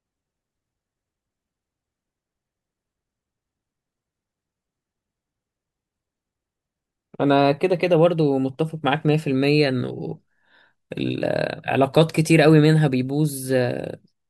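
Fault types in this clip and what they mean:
No faults are audible anywhere in this recording.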